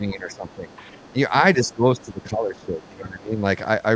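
An echo canceller that likely could not tell the near talker from the far side's loudspeaker echo pulls the speech down from 0.0 to 0.69 s. The voice dips by about 10 dB for around half a second in total, sounding muffled and patchy: speech suppressed in double talk. Overlapping it, from 0.31 to 0.77 s, the canceller likely fails to remove the other side's voice leaking through. It is a faint second voice about 30 dB under the talker. The same leak returns from 0.93 to 1.1 s. Right after it, from 1.11 to 1.17 s, a brief suppression clips the speech by about 10 dB. The longest stretch runs from 1.56 to 3.44 s. For roughly one and a half seconds of that span the speech drops by as much as about 15 dB, fading and breaking up as the canceller likely keeps clamping down. Inside it, from 2.82 to 2.86 s, a short scrap of the far voice slips through about 35 dB below the speech. The call's microphone processing leaves nothing above 8 kHz throughout.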